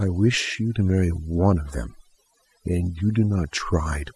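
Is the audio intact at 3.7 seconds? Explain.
No, not really. At 3.7 seconds you're still hearing the overdone noise removal that runs through the whole clip. The noise reduction is pushed so hard that any frequency band sitting close to its idea of the noise floor gets pulled way down or cut, and the softer parts of the speech get caught too. So the background there drops away and breaks up into little twinkly, warbling specks.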